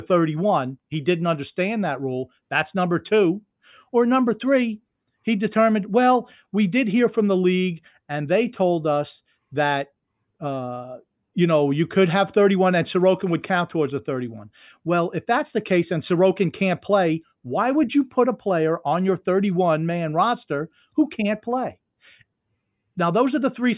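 Speech recording, no technical faults audible anywhere in it.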